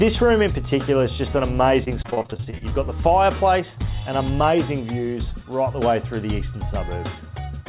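From 1.84 to 2.72 s the audio breaks up into repeated packet loss with a robotic sound: a rapid run of short dropouts, none longer than about 27 ms, each patched by stretching the previous sound before the next hole arrives. Concealment fills roughly a third of that stretch, about 325 ms in all, so the sound turns choppy and robotic, with pieces missing. Throughout, the band stops at 4 kHz, consistent with a 64 kbps G.711 call path.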